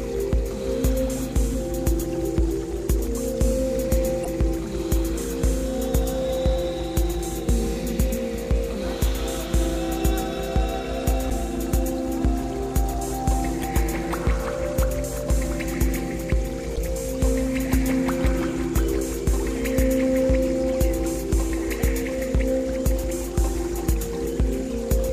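At 4.22, 11.27, 13.60 and 16.73 seconds there are brief blips, each about 44 ms long. This is damaged data in a compressed stream. Corrupted bytes upset the decoder. It loses sync, hunts for the next frame header, and outputs a short glitch.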